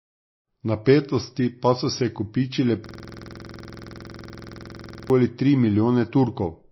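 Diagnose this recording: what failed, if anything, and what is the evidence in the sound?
Codec stage. The whole clip sounds watery and swirly, and nothing is heard above 5.8 kHz. That hard treble ceiling and the unstable band detail point to likely MP3 compression, starved of bits at a low rate near 25 kbps.

Driver or buffer stage. Right after "pa so se kopičile", at 2.86 s, the audio locks into a system hang loop until 5.10 s. One 46 ms slice repeats dozens of times, a stutter at 21.5 Hz. That fits a frozen driver recycling a 2048-sample buffer.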